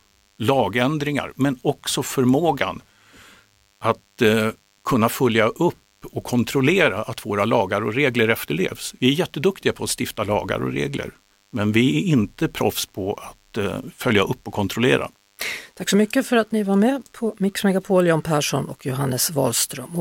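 A thin, steady buzz at 100 Hz, rich in harmonics and about 40 dB below the speech, runs throughout: DECT cordless phone buzz, from radio bursts every 10 ms being rectified.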